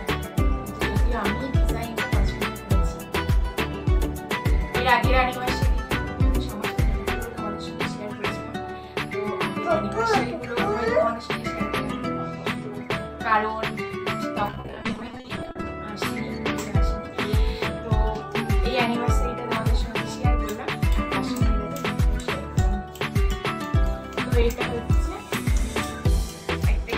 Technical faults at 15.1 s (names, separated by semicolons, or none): repeated packet loss (robotic sound)